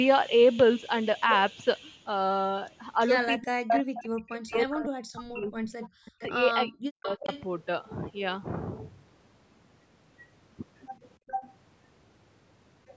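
From 3.4 to 5.72 s and again 6.08 to 7.27 s, speech suppressed in double talk: the level plunges by roughly 40 dB in patches, which on a waveform looks like gaps carved out of the envelope, likely because the echo canceller ducked both talkers. Echo leak comes at 3.42 to 3.82 s, 4.34 to 6.24 s, 7.1 to 7.43 s, 11.27 to 11.51 s and 12.87 s to the end. It is a delayed copy arriving 341 to 397 ms late, likely loudspeaker pickup the canceller missed. It shows as repeated spectrogram patterns, from nearly speech level down to very quiet.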